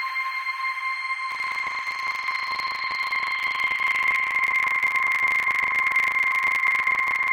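From 1.28 s to 7.31 s a steady robotic rattle at 25 Hz rides on the sound. This is buffer tearing: writer and reader have slipped, so about a third of each 40 ms period replays audio from roughly 70 ms earlier, with hard joins.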